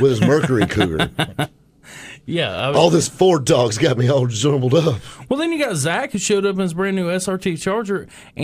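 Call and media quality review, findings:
Block of digital silence at 2.59 s: a 0.73 ms hole (a 32-sample gap) heard as a single tick. The output buffer likely went unfilled and dropped to zero with hard edges, making a click rather than a dropout.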